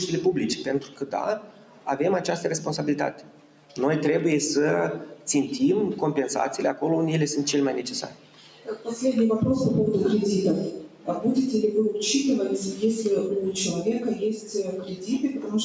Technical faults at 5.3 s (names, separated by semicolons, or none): noise suppressor applied to music or sounds; sound cut by the noise suppressor